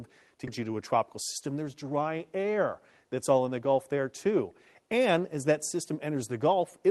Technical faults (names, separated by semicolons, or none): skip ahead; jitter buffer speed-up